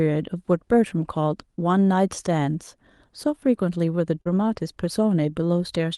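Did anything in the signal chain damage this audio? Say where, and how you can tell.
Yes, at the network stage: short concealed packet loss near 4.21 s, where about 40 ms never arrived. The decoder extended the preceding sound to bridge it, giving a brief smear rather than a hard dropout click.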